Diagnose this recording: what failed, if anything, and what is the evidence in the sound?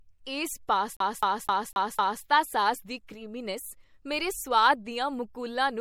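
The speech has a watery, swirly quality all the way through, with nothing above 18 kHz, so the likely culprit is MP3 compression at the codec stage. The damage is plainly audible, which points to a low bitrate around 64 kbps, where the encoder drops weak bands and clips the treble.

From 0.97 to 2.24 s there's a CD stuck on one turn, a storage and playback fault. The same 254 ms slice plays five times, with a short mute at each jump, just before "ਸਾਸ ਦੀ". That's a scratch throwing the laser back one track on every rotation.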